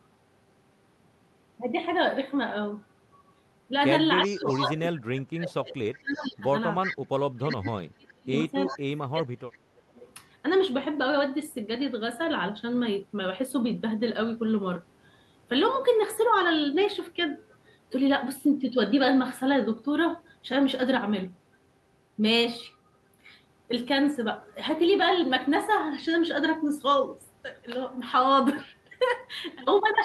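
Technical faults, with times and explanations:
4.24 to 10.12 s, echo leak: five short delayed copies of the sound, each trailing the original by 368 ms, at 4.24–4.57, 6.13–6.26, 6.83–6.97, 8.67–8.79 and 9.56–10.12 s. Their level varies widely, from about 35 dB below the direct sound at 6.13 s to only about 5 dB below at 6.83 s. This is likely a far end on loudspeaker whose echo canceller let residual pickup through and returned it down the line.
4.25 to 9.8 s, speech suppressed in double talk: in two stretches, 4.25–6.85 s and 7.38–9.8 s, the speech dips and breaks up in pieces while the other side is also active. About 2 s is affected in each stretch. The deepest cuts reach about 30 dB in the first stretch and about 35 dB in the second. The likely cause is the echo canceller failing to tell local speech from loudspeaker echo and attenuating both.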